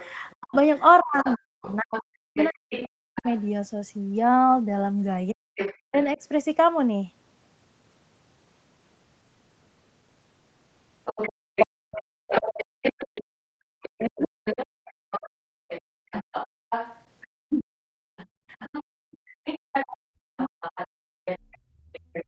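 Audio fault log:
0.00–5.74 s: other side's voice leaking through. Echo cancellation likely failed to remove the loudspeaker pickup, so a second voice runs underneath, about 10 dB below the main speech.
0.35–6.19 s: speech suppressed in double talk. With both sides talking at once, the canceller likely turned everything down, so the voice dips by up to about 40 dB, roughly 1.5 s in total.
11.05–22.27 s: other side's voice leaking through. Residual loudspeaker echo likely reaches the microphone again, adding a second voice about 10 dB under the main speech until the end.
11.33–22.27 s: background gated by the echo canceller. The canceller clamps the microphone hard while the loudspeaker plays, so the room sound drops by up to about 39 dB before recovering.
12.92–16.35 s: speech suppressed in double talk. Overlapping talk likely made the canceller attenuate the near voice, which dips or cuts out by up to about 40 dB across roughly 3 s.
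20.05–20.64 s: speech suppressed in double talk. A brief overlap likely triggered the same suppression, pulling the voice down by up to about 40 dB for about half a second.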